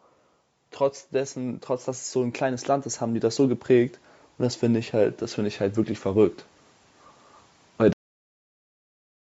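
From 0.57 to 4.03 s, automatic gain rising is audible: the gain control judges the speech input too quiet and steps its gain up gradually, by about 9 dB in total, so the voice and the background noise swell together over roughly three and a half seconds.

At 7.93 s the audio has a cut-off end. The final buffers were never written out, so the speech stops mid-sound and drops straight to digital silence with no natural decay, and that silence runs to the end of the clip. Throughout, the band tops out at 8 kHz, as expected from call microphone processing.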